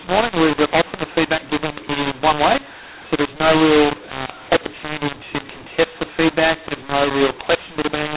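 Mu-law and A-law mixed up throughout: speech coded as A-law is decoded as mu-law, scrambling levels into harsh distortion and filling pauses with noise.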